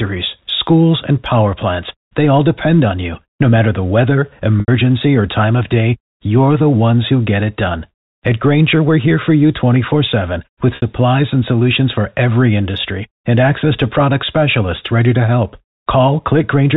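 At 4.60 s the speech drops out for 80 ms, and again at 10.76 s for 60 ms. Both are packet loss with pitch repetition. The receiver repeats the last pitch period to fill each gap, fading it out. Each fades into silence, and the speech returns with a short cross-fade.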